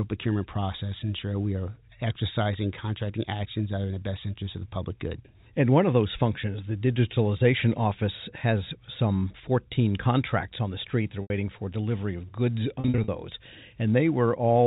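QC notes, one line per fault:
11.22–11.30 s and 12.80–13.08 s, packet loss with pitch repetition: the last pitch period is repeated to fill each gap, heard as a brief held, buzzy tone. First gap 80 ms; second 160 ms scattered over 280 ms, runs at most 40 ms.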